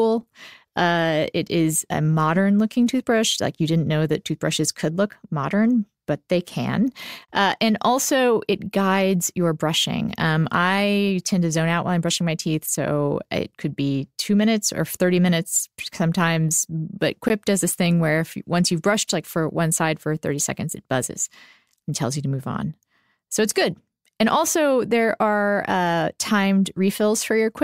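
At 7.25 to 7.28 s and again at 17.28 s, the speech drops into brief silences of about 30 ms and 16 ms, spaced 10 s apart. These are gaps at a join of encoded pieces: separately encoded segments were butted together untrimmed, leaving encoder delay and end-frame padding audible as abrupt, smeared dropouts.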